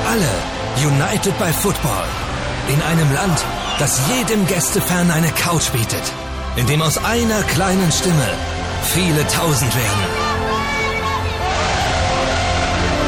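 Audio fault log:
throughout, MP3 compression: plainly audible codec damage that points to a low bitrate, around 64 kbps, is likely the cause. With bits scarce, the encoder discards spectral detail it judges inaudible, and the gaps left behind give the sound its degraded, watery texture.
2.21 s and 5.58 s, compressed frames skipped: each time the sound jumps ahead by roughly 30 ms, which fits the loss of a single MP3 frame of about 26 ms. Overlapping neighbour frames blend across the gap, so each join is a short smeared blip, not a click.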